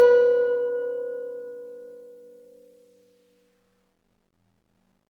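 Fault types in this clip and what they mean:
Transcoding between lossy codecs: the music carries two layers of coding artefacts heard together, which fits a modest-rate MP3 likely re-encoded as low-rate Opus. On a spectrogram the treble looks patchy and blotchy, with nothing above 20.2 kHz.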